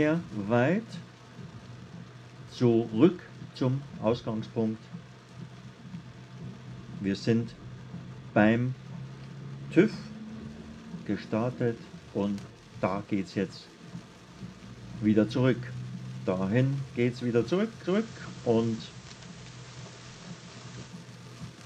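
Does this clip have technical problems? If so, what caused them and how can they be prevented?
Yes. From 17.82 s to 20.97 s the radio switches from digital to the analogue FM signal. This is digital radio blending to analogue. The cross-fade takes about 107 ms. The level shifts by about 1 dB. Steady hiss appears, roughly 25 dB below the sound. It returns to digital at 20.97 s. Better reception or a stronger antenna keeps the receiver on the digital signal and prevents the blend.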